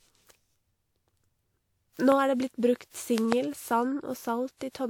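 Throughout, the speech sounds swirly, smeared and hollow, with consonant attacks blurred and nothing above about 20.1 kHz. This is likely generation loss: repeated lossy re-encoding, pointing to about four passes through WMA near 96 kbit/s, each re-quantising on a shifted frame grid so noise and spectral holes accumulate.

From 2.12 to 2.14 s a sharp pop, about 15 dB above the speech, cuts in while the speech carries on beneath it. Then, from 3.18 to 3.34 s, two pops arrive in quick succession, about 20 dB above the speech. Both are loud pops, likely sudden voltage steps or pulses from a plug, switch, static or driver glitch, shaped by the circuitry after them.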